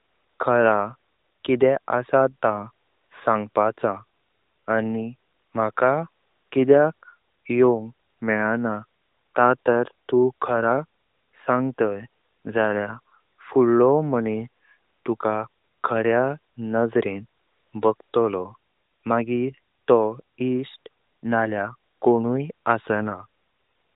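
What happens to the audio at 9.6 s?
Nothing goes wrong at 9.6 s: the speech carries on intact, with the narrowband AMR mobile codec and the quiet room noise continuing.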